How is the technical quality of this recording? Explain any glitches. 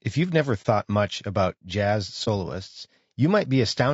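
The speech carries plainly audible coding damage throughout, plus two short dropouts. The whole recording sounds rough and grainy, with noise filling the gaps between harmonics and a top band that sounds synthetic. This is likely low-delay AAC compression (AAC-ELD) at a low rate, which fits around 32 kbps. The coder has too few bits to describe the spectrum cleanly.

At 0.62 to 0.66 s and again at 2.24 to 2.28 s, the sound briefly dips out and back in. Each gap fits a single lost AAC frame of about 30 ms with muting. The decoder zeroed that frame's spectrum, and the overlapping windows softened the edges into a fade.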